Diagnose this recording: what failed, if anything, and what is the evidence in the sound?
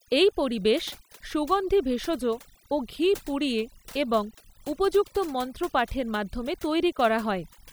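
Overdone noise removal in the call-processing stage runs through the whole clip. Pauses fall to near silence dotted with twinkling specks, and quieter parts of the speech are gated off with the noise. Codec artefacts would mainly smear speech, not hollow out pauses.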